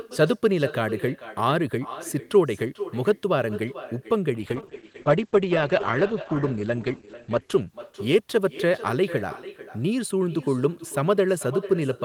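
Echo with no canceller runs through the whole recording. The far end's loudspeaker feeds back into its microphone and nothing removes it, so each phrase returns roughly 0.4 s later as a thinner copy, about 15 dB below the speech.

A call bitrate drop runs from 4.38 to 8.99 s, after the bandwidth estimate fell and the encoder was starved of bits. The speech turns rough and muffled, with the top end cut to 8 kHz, which points to a fall from 48 to 10 kbps, bottoming out for 2.8 s.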